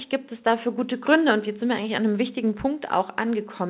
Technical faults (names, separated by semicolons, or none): none